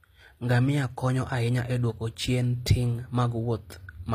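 From start to finish the speech carries plainly audible codec damage, most likely HE-AAC compression at a low rate in the region of 24 kbps. The upper band is rebuilt by copying lower bands upward rather than coded directly, so sibilants sound gritty and metallic, their harmonics misaligned with the body of the sound. On a spectrogram the treble looks smeared and blocky, patterned after the lower bands, and nothing appears above 15.5 kHz.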